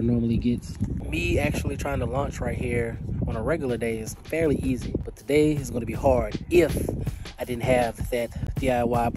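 Right near the end, from about 8.47 to 8.50 s, there's a short burst of damaged data in the compressed stream. Some of the encoded bytes at that spot got corrupted, so the decoder couldn't make sense of those frames. It lost its footing and had to hunt for the next valid frame header before carrying on. You hear it as a quick glitch, about 30 ms long, cutting across the sound before things pick up again.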